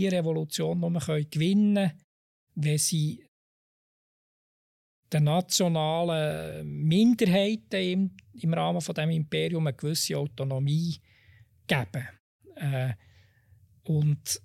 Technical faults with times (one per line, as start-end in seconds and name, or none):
none